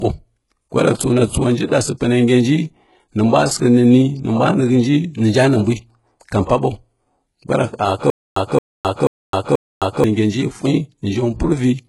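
Throughout the speech, the treble sounds synthetic: sibilants come out gritty and lispy, and nothing reaches above 11.5 kHz. That points to heavy HE-AAC compression, likely at a very low bitrate around 12 kbps, where spectral band replication copies lower bands upward instead of coding the real high frequencies.

At 6.46 s a sharp attack is preceded by a brief hiss lasting 32 ms, and the onset sounds smeared. This is pre-echo. The codec spread its quantisation noise across the whole transform block, so noise meant for the loud attack also filled the quiet moment before it.

From 8.10 to 10.04 s there is a stutter with silent gaps. A 222 ms fragment plays four times, each followed by 262 ms of digital silence, repeating every 484 ms. The likely cause is a stalled player or stream replaying its last buffer on each retry. The audio that should have played during those gaps is lost.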